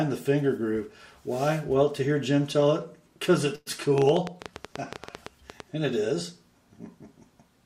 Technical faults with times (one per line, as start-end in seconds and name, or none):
3.55-3.68 call audio freeze
3.98-5.61 train of clicks